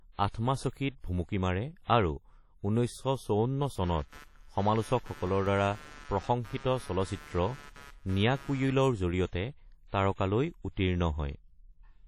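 Speech, carried throughout by a heavily damaged transform-codec signal, most likely WMA compression at a low rate that fits about 32 kbps. Long transform blocks spread quantisation noise over tens of milliseconds, so the voice sounds ringing and washy, with hiss that swells and falls with the speech, and weaker spectral detail drops out where the coder zeroes it. The band stops at 19.7 kHz.

The same block behaviour causes a pre-echo from 1.00 to 1.04 s. A sharp onset lands late in a transform block, and the noise budget set for that loud attack is spread across the whole block. A hiss of about 38 ms therefore runs ahead of the attack, which loses its crispness and sounds smeared.

From 3.83 to 8.73 s there is computer activity noise, a buzzing pulse repeating at roughly 150 Hz and sitting around 20 dB below the speech. It follows the host machine's load rather than the speech. Processor, graphics or mouse activity shifts the ground shared with the audio circuitry, and that disturbance is coupled straight into the signal path.

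Overlapping it, CD scratch ticks run from 5.08 to 6.62 s. Nine ticks are spread through that 1.5 s stretch, regular in rhythm, uneven in strength, the longest lasting about 5 ms. A scratch or blemish on the disc wipes out more data on each revolution than error correction can restore. The player then interpolates or mutes the lost samples, leaving a tick or a tiny gap once per turn.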